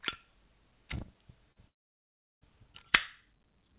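A recording of everyday sound carried over a call link, band-limited with nothing above 4 kHz, which fits a G.711 mu-law codec at 64 kbps. At 1.52 to 1.58 s there is short concealed packet loss: about 40 ms of audio never arrived, and the receiver patched the gap by extending the preceding sound before blending back, leaving a brief smear or wobble. Unlike a dropout, the sound carries straight on afterward with no audible hole, because the patch is too short to decay into silence. From 1.68 to 2.43 s comes a long network dropout, likely caused by the connection stalling for about three quarters of a second. The last sound is continued only momentarily as a fading buzz or hiss, then the stretch goes almost entirely silent before audio resumes further along, with that portion simply missing. What separates it from the earlier glitch is the length and the dead quiet in the middle.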